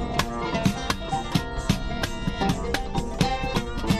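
No technical faults can be heard anywhere in the audio, and the signal stays steady and intact throughout.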